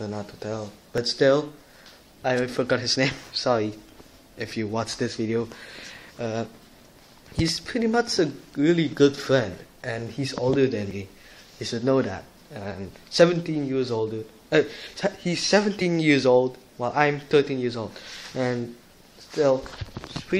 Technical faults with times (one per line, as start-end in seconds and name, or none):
0.98 overlap between stream segments
10.91 overlap between stream segments